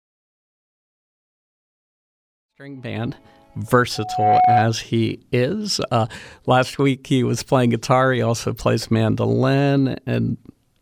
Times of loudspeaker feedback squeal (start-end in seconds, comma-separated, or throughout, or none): 3.95-4.76